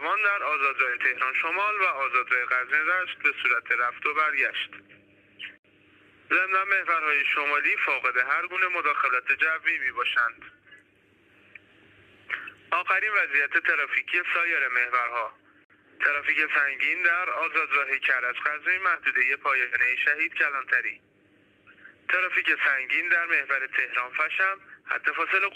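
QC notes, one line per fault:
5.58–5.64 s and 15.64–15.70 s: gap at a join of encoded pieces. Silences of 67 and 54 ms, ten seconds apart, where separately encoded pieces meet with their start delay and end padding untrimmed. Each shows as a flat waveform dropout and a blank vertical band on a spectrogram with slightly smeared edges, then the sound resumes where it stopped.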